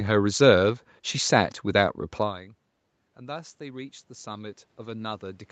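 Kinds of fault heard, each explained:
Automatic gain rising: after the input drops about 22 dB, gain climbs gradually from 3.16 s, lifting the background along with the voice, unlike a talker moving closer.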